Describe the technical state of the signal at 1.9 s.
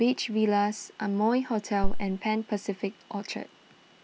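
At 1.9 s you're right in the middle of a phantom power thump, which runs from about 1.84 to 2.05 s. Someone has switched the supply on a live input, and that sudden DC step pushes through the coupling capacitors as a deep thump. It peaks at about -12 dBFS, and its main energy dies away in around 49 ms before the tail settles.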